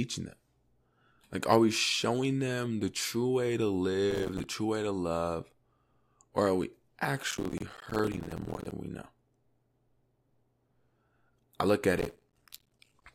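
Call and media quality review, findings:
Processor overload crackle, 4.11–4.44 s, 7.31–8.72 s, 11.99–13.04 s. Audio processing misses its deadlines repeatedly, many in a row, on what sounds like buffers of a few milliseconds. Each miss drops a short hole of silence with hard edges into the speech, heard as gritty, tearing crackle over the sound. The longest burst is at 7.31–8.72 s. Each burst clears when the load passes.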